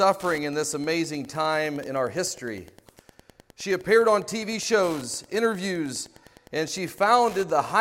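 Throughout, Wi-Fi interference adds a steady ticking every 102.4 ms, roughly 25 dB below the signal: beacon bursts from a nearby radio, rectified by the audio circuitry.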